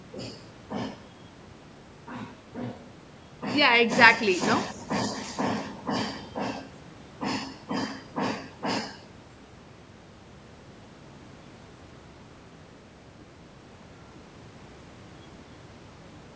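Speech recording with no technical faults to report.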